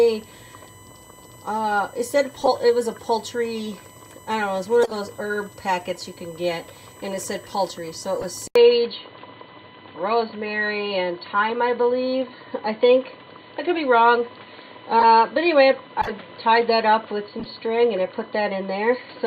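A steady high whine sits under the sound for the whole clip, pitched at 1 kHz with its strongest component at 8 kHz, about 25 dB below the signal. This is USB whine. The bus polls in 1 ms frames and 125 microsecond microframes, and that periodic current draw leaks into the audio through shared power or ground, leaving fixed tones at exactly those rates.

At 2.41 to 2.48 s, 4.83 to 4.95 s and 8.20 to 8.25 s, short chirps and bursts of noise break through. The one at 4.83 s is loudest, peaking near -5 dBFS, and the one at 8.20 s is much fainter, around -20 dBFS. Each is a corrupt frame decoded. Flipped bits in the compressed stream were played anyway, so misread gains and codes threw energy to the wrong frequencies for the span of a few damaged frames.

At 8.48 s the audio drops out for about 80 ms and returns dull and boxy, with nothing above 4.5 kHz and a new background hiss about 30 dB below the signal. 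Loudness stays about the same, and the narrowed sound continues to the end. This is most likely an input switched to a poorer device, a narrower-band microphone or headset path with its own noise floor taking over mid-recording.

Further corrupt-frame bursts follow at 14.99 to 15.04 s, peaking near -5 dBFS, at 16.01 to 16.11 s, near -10 dBFS, and at 17.39 to 17.46 s, a quieter blip near -20 dBFS.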